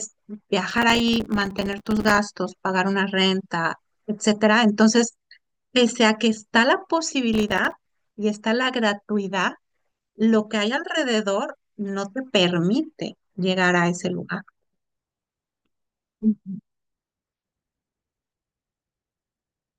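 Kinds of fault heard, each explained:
Processor overload crackle: Gritty, tearing crackle rides on the speech from about 0.71 to 2.18 s and again from 7.34 to 7.86 s. Dozens of very short buffers, each a few milliseconds, miss their deadline in a row, and each miss drops a hard-edged sliver of silence.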